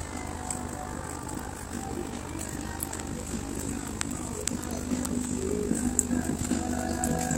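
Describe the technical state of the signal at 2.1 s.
Overlap-add ripple is present at 2.1 s, as it is across the whole clip. The frames were rejoined with an overlap whose gain does not sum evenly, so the level dips and swells by about 11 dB around fifty times a second. The result is a rough, buzzy flutter.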